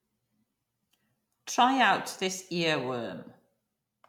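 A speech recording, and nothing is technically wrong with it.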